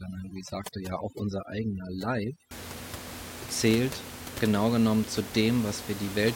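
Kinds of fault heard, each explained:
Overdone noise removal: until 2.51 s, bands near the noise level are cut, leaving twinkling near-silence, unlike the steady room noise later.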